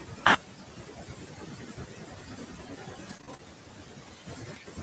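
From start to end, the noise suppressor misjudges steady noise frame by frame, leaving noise suppressor artifacts: background that sinks and swells around the speech. Across the same span it also treats parts of the speech as noise, so speech cut by the noise suppressor leaves soft consonants and word endings swallowed, dipping by about 18 dB at worst. From 3.09 to 3.41 s, repeated packet loss opens four short holes, the longest 25 ms. Concealment continues the previous sound over roughly a quarter of that stretch, giving a choppy patch with pieces missing.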